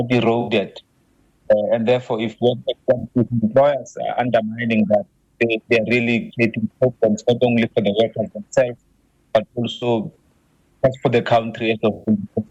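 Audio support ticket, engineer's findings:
AAC frame loss with concealment, five dropouts: 0.41–0.49 s, 2.99–3.04 s, 6.21–6.33 s, 9.71–9.87 s, 11.93–12.09 s. Gaps run roughly 43 to 107 ms, which fits a few AAC frames going missing each time. The decoder patches each hole from the last good spectrum, so you get a short smeared, noisy or phasey blur instead of silence. Likely packet loss upstream of the decoder.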